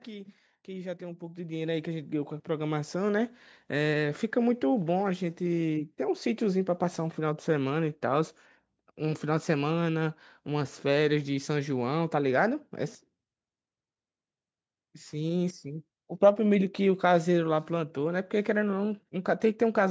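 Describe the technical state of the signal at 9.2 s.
At 9.2 s the speech and the background noise are still swelling together, part of a steady climb in level from 0.05 s to 11.55 s. This is automatic gain rising: the gain control judged the input too quiet and kept raising its gain, by about 13 dB overall.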